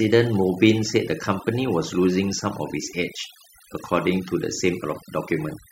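From start to finish, the background sinks to near silence dotted with twinkling specks. This is overdone noise removal: an over-aggressive noise reducer cut individual frequency bands close to its noise estimate, taking quieter parts of the speech with them.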